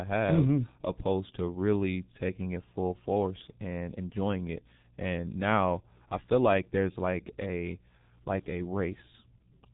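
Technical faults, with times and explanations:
Throughout, G.723.1 codec: the whole clip has that early internet-phone sound. The speech is dull and boxy because nothing gets through above about 3.8 kHz, and the damage is heavy. There's a rough, hoarse edge, and consonants smear together. That fits a coder squeezing speech down to roughly 6 kbit/s and working in 30 ms frames. It redraws its model of the voice only that often, so quick changes in the sound get blurred across each frame.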